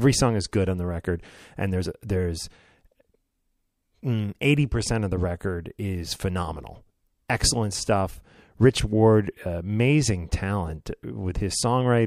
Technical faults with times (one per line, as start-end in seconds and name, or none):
7.28 pre-echo